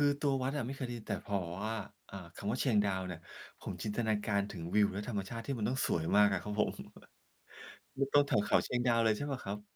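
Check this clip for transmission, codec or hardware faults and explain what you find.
I found no faults in this clip.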